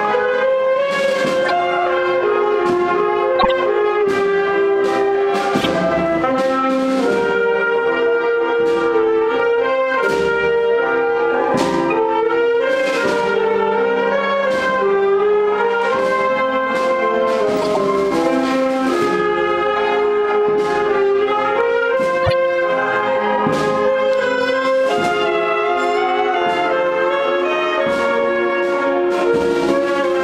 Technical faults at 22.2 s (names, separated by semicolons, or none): corrupt frame decoded